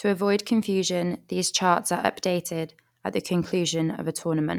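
Speech recording with no audible technical faults anywhere.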